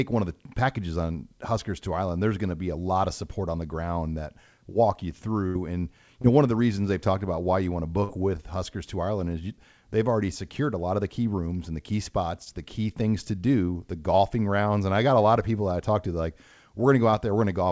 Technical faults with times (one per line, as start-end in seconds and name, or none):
5.47-5.56 burst of packet loss
6.22-6.25 short concealed packet loss
8.04-8.10 burst of packet loss
12.45-12.47 short concealed packet loss
17.11-17.14 short concealed packet loss